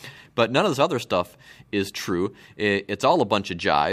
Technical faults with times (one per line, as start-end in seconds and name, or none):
none